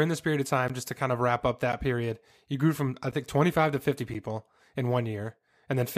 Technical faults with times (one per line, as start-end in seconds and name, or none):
0.68 block of digital silence
1.72 block of digital silence
3.11 block of digital silence
4.14 block of digital silence